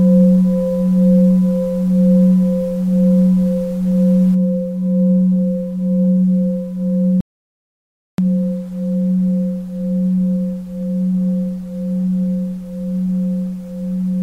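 An audio dropout to silence runs from 7.21 to 8.18 s. The sound cuts off mid-flow into silence, with no room tone, for nearly a second, then resumes. The input was likely lost while recording continued writing silence, so that stretch is gone.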